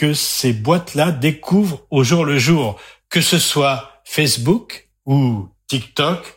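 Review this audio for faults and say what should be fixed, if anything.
Nothing here needs fixing; it's a short speech recording and no faults turn up anywhere in it.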